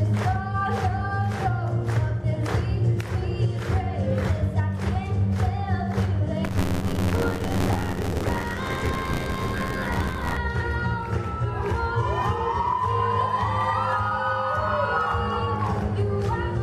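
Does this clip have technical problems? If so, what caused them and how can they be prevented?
Yes. From 6.44 to 10.37 s, a rattling robotic buzz at 86.1 Hz is buffer tearing. Writer and reader slip and cross inside each buffer, splicing in stale audio, which fits a 512-sample buffer. Prevent it by keeping the writer safely ahead of the hardware read position, with enough buffering and a higher-priority audio thread.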